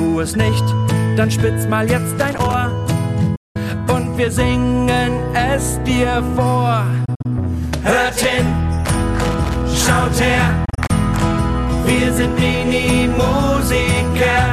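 At 2.19 to 2.54 s, a loose connector crackle: a worn contact makes and breaks, chopping the signal into an irregular burst of scratchy crackle. At 3.35 s, a digital broadcast dropout: the receiver loses valid frames and mutes, with an 8 ms fade into a solid hole of about 192 ms, which fits eight lost 24 ms frames. At 7.05 to 7.26 s, another dropout scatters about 96 ms of muting across 192 ms, in gaps no longer than 48 ms, so the sound stutters. At 9.24 to 9.66 s, the connector crackle returns. At 10.65 to 10.91 s, a third dropout spreads about 96 ms of loss over 240 ms in brief holes of up to 24 ms.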